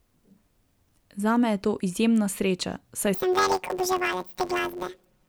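From 3.14 s to the end at 5.28 s, planar audio is read as interleaved. Short 10.88 ms blocks produce a robotic buzz at about 92 Hz.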